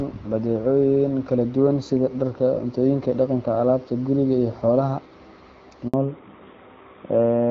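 A speech recording carried over a phone call cuts to silence for 60 ms, from 5.88 to 5.94 s. That is a handover gap: while the call switched networks, no speech frames arrived. The sound falls away quickly and stays silent, with no buzzy concealment fill. That sets it apart from scattered packet loss, which tends to leave smeared or repeated fragments. From 5.94 s to the end, a fallback to narrowband removes everything above 4 kHz. The light, clear HD Voice character heard earlier gives way to a duller, rougher tone, which points to a drop from AMR-WB to AMR-NB. Because it begins right at the gap and never recovers, it reads as a codec switch rather than a simple filter.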